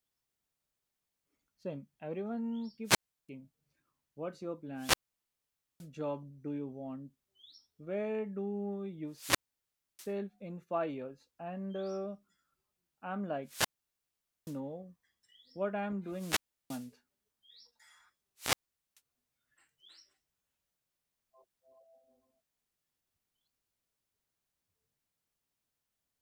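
Six wireless microphone squelch dropouts break up the speech, at 2.84–3.29 s, 4.75–5.89 s (after "what's your", resuming on "job do you want"), 9.08–10.15 s, 13.43–14.60 s, 16.07–16.96 s (after "what I'm") and 18.36–19.01 s. Each time the radio link fades, hiss swells, then the receiver's squelch mutes the output for roughly 0.34 to 0.87 s before speech returns. That rise of static ahead of the silent gap distinguishes it from a clean digital packet dropout.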